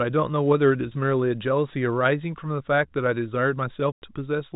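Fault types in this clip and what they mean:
Packet loss filled with silence: a single hole of about 100 ms opens in the speech from 3.92 to 4.02 s, where the signal drops straight to silence and resumes with hard edges at both ends. The length fits five lost 20 ms packets. Unlike concealed loss, nothing is smeared or repeated to bridge the gap, and unlike a fade or gating dropout there is no gradual decay. The narrow telephone band of the G.711 coding continues on both sides of the gap.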